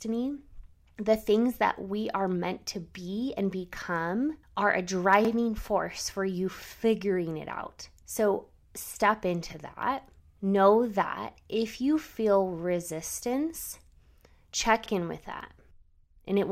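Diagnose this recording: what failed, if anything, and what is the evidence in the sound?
Repeated buffer at 5.25 s, between "and become are a" and "force for you figuring", and at 14.86 s, before "in with that". At the driver or buffer stage, audio arrived late, so a 46 ms slice, fitting a 2048-sample buffer, replays once as a hard-joined stutter.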